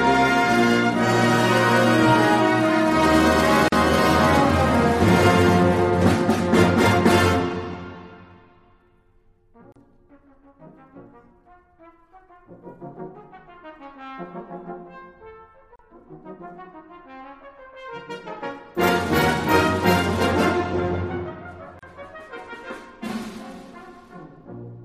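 At 3.68, 9.72, 15.76 and 21.79 s, one every 6 s, a gap at a join of encoded pieces opens: 41 ms, then about 34 ms thereafter, from untrimmed encoder delay and padding. Each sounds like a brief dropout and shows as a vertical stripe with smeared edges across all frequencies.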